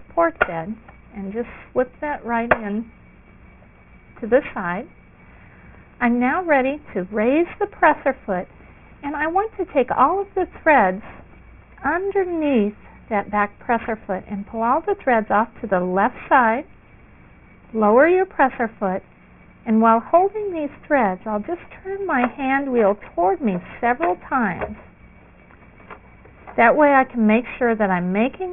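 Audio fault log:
throughout: aliasing. The top sounds gritty and metallic, with stray unrelated tones about 20 dB under the signal and energy running hard up to 3 kHz. Content above that edge folded back down, which fits resampling from 48 kHz to 6 kHz without filtering first.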